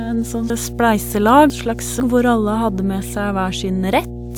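A steady mains hum at 60 Hz runs under the speech for the whole clip, fairly loud, roughly 10 dB below the signal. A ground loop or nearby transformer is leaking the power line into the audio. It is a smooth low tone rather than a raspy buzz, and it stays constant regardless of what the speech is doing.

From 0.5 to 2.0 s, chunks play out of order. A 500 ms block that belongs at 0.5 s arrived two chunks late, so it plays at 1.5 s, after the material that should follow it. Hard joins fall at 0.5, 1.5 and 2.0 s. The passage sounds jumbled, but unlike a dropout no audio goes missing.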